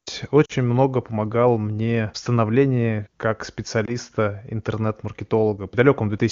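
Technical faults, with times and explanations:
0.45–0.52 s and 3.85–3.91 s, lost AMR speech frames: speech frames were discarded after failing their checksum, so the AMR wideband (HD Voice) decoder filled each gap by repeating the last good pitch and vocal tract settings at falling gain. The first gap sounds like about two 20 ms frames, giving a short drop toward near silence. The second sounds like a single frame, heard as a brief dip before the audio returns weak or rough for a moment.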